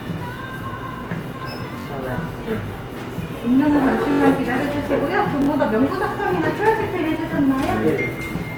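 Throughout, the sound has a rough, grainy texture, likely from Opus compression at a low bitrate. The spectrogram stays filled to about 20 kHz, with bands smeared into noise rather than left empty. At 1.79–1.86 s, 4.12–4.20 s and 5.42–5.48 s, a repeated buffer causes a brief buzzy stutter: one roughly 21 ms chunk, fitting a 1024-sample buffer, replays three, four, then three extra times. On the waveform, each stutter appears as identical blocks with hard joins.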